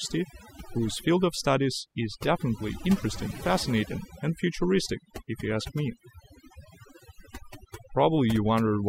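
Overdone noise removal runs throughout: the noise reduction shuts off frequency bands near its noise estimate, leaving a lowered background that breaks up into twinkling specks.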